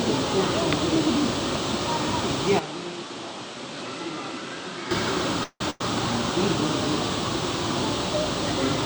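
From 2.59 to 4.91 s the input was likely switched to a poorer device. The band stops at 10.7 kHz, the level falls by roughly 10 dB, and a faint new noise floor appears. The sound turns dull and smaller with no gap at either switch, then clears at 4.91 s.

At 5.43 s a call audio freeze begins: packets were probably held up and the jitter buffer ran dry. The receiver stretched the last sound for 168 ms, fading into about 60 ms of silence. At 5.61 s playback resumes where it stopped, nothing lost but everything after now 168 ms later.

A burst of packet loss follows from 5.70 to 5.81 s. About 90 ms of audio went missing, and the receiver filled the hole with 98 ms of the last sound continued and turned down, a brief fading buzz or hiss before the audio jumps ahead past the missing part.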